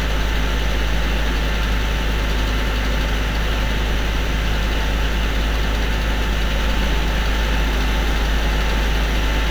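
At 6.59 s a doubled audio track begins abruptly and runs to the end of the clip. A second full-band copy of the sound trails the original by around 150 ms, sitting roughly 5 dB lower, with no decay or room colouring, so every transient is followed by a crisp, identical repeat. The likely cause is the same audio being captured a second time through a slower path and mixed back in.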